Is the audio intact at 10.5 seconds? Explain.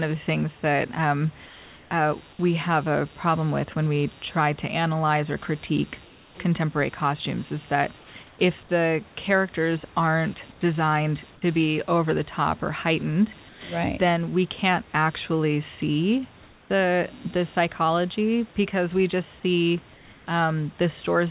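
No. From 10.52 to 10.61 s, about 90 ms, the real room background drops out and comfort noise takes its place. The likely cause is discontinuous transmission: the sender stopped sending during the pause, and the receiver filled the gap with synthetic noise. That noise is steady and featureless. It lacks the detail of the real background and sits about 3 dB quieter, so the pause briefly sounds flat.

Computer activity noise also runs through this moment, as it does across the whole clip. Load changes in the computer shift the shared ground of the audio circuit. That puts a buzzy, pulsing hum into the signal, repeating at around 150 times a second. It sits roughly 30 dB below the sound. It follows the machine's activity rather than the audio, so it lingers under the pause.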